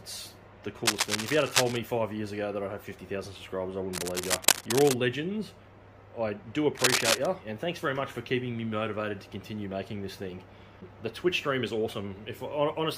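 Three bursts of scratching, rustling noise sit on top of the sound: from 0.85 to 1.78 s, from 3.93 to 4.94 s, and a shorter one from 6.77 to 7.26 s. The first two are roughly as loud as the sound itself, and the last is somewhat louder. This is cable scratch noise, likely from a worn cable, connector or control being moved, so its contact resistance jumps about rapidly and adds dense, uneven crackle.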